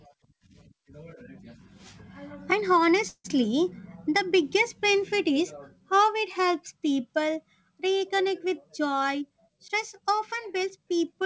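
A speech recording carried over a call link, with nothing above 8 kHz, which fits a wideband codec such as G.722. At 3.08 s the sound stops moving forward for about 0.18 s. The last sound is stretched out as a fading buzz or hiss, and the final 60 ms or so is silent. This is a call audio freeze. The likely cause is delayed packets draining the jitter buffer. When the audio resumes, it picks up where it left off. Nothing is lost, but everything after it runs about 164 ms late. A jitter buffer speed-up starts right after "helps people reconnect with", at 9.01 s, and lasts until 11.22 s. Here the receiver trims tiny pitch-period pieces, again and again, to shrink a buffer that had grown too full. The speech plays about 6% faster at unchanged pitch, with about 150 ms removed in all. It sounds slightly hurried.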